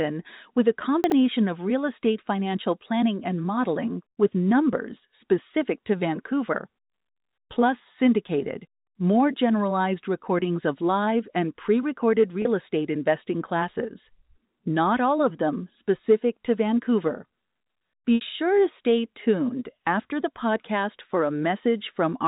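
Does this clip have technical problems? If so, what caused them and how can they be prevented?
Yes. There are two kinds of fault.

Chunks out of order: Between 1.04 and 1.12 s, a 20 ms slice of audio plays three chunks later than it should. The sound jumps back and forth over that short span, with hard joins where the pieces meet. Nothing is missing; the pieces are simply shuffled. This points to a jitter buffer or write path that released a late packet instead of slotting it back by sequence number. Reordering by sequence number before playout prevents it.

Packet loss with pitch repetition: Three dropouts are concealed by repeating the last pitch period. The first runs 4.11 to 4.17 s (60 ms), after "financial planning and modeling" and before "with numbers specific to". The second runs 12.42 to 12.45 s (30 ms), after "live and pre recorded" and before "estate investing classes". The third runs 18.16 to 18.21 s (60 ms), just before "sure to stay tuned". 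The 30 ms one sounds like a briefly held, buzzy tone. The 60 ms ones fade into silence as the repeated cycle decays, followed by a short cross-fade back into the speech. The 60 ms gaps fit two consecutive lost packets. Forward error correction, redundancy or a larger jitter buffer on a more stable network link would reduce these losses. The narrow telephone band with nothing above 4 kHz comes from the G.711 coding of the line and is not one of these faults.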